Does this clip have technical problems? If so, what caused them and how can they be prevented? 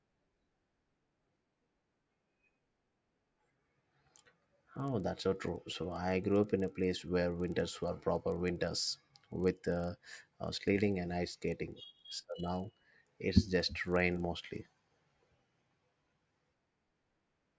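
Yes. A resampler restarted on every block runs through the whole speech clip, heard as regular ticks at 25 Hz that are present only while someone is speaking. The 48 kHz audio was converted to 16 kHz in 40 ms pieces, each handled separately, so the filter lost its neighbouring samples at every block edge and left a small error there. Prevent it by keeping one resampler instance running across blocks so its filter history carries over.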